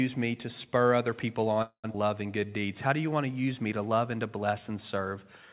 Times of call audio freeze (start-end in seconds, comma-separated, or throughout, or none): 1.62-1.86